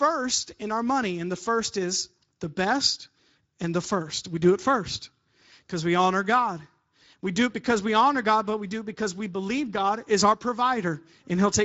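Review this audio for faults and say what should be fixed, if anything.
Speex codec damage is plainly audible throughout: the CELP coder starves the excitation of bits, and content stops near 7.7 kHz, fitting a roughly 16.8 kbps setting. Prevent this by capturing or transmitting with a higher-quality codec or bitrate.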